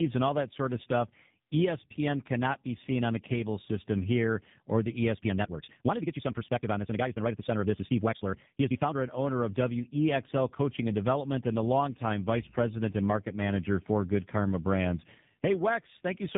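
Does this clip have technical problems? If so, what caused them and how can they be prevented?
Yes, two things. The whole clip has tandem speech coding. The audio went through two low-rate speech codecs in a row, which fits a GSM full-rate leg followed by AMR-NB at around 7.4 kbit/s, with a plain G.711 hop between them. The second coder had to work on the first one's already damaged output, so the roughness and warble stack up, which makes it sound muffled. To prevent it, keep the call in one codec end to end, or pass it through untouched with transcoder-free operation.

From 5.12 to 8.96 s there's a time-stretched section. The pace suddenly jumps to about 1.63 times normal while the pitch stays put, so that stretch sounds rushed. The likely cause is software squeezing that part to fit a set length by cutting short chunks of the audio. To prevent it, don't retime the audio at all, or apply any change gently and evenly across the whole clip instead of compressing one section.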